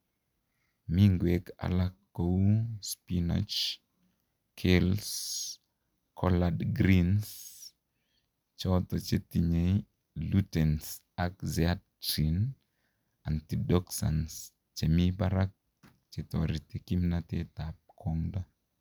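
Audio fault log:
No faults heard in the speech at any point.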